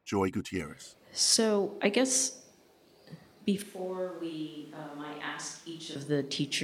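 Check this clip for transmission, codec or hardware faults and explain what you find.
One fault stands out. From 3.62 to 5.96 s the speech abruptly goes roomy, hollow and thin, which is a switch to a distant microphone, likely because the close mic's feed dropped out. Level falls about 10 dB and background noise rises to roughly 25 dB below the voice. On the waveform the envelope visibly shrinks, and on the spectrogram the low end thins while a raised noise floor fills the gaps.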